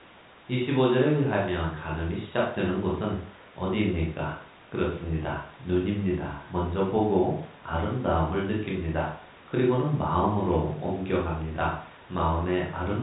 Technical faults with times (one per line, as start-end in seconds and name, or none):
none